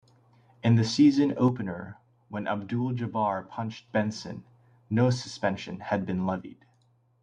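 A likely loss of one stereo channel hits twice: from 1.48 to 3.88 s, right after "the season", and again from 6.41 s to the end, after "no suspension had". With one side gone, the mono sum carries only half the shared signal, so the speech drops abruptly by about 6 dB at each onset. The first dip recovers just as suddenly at 3.88 s.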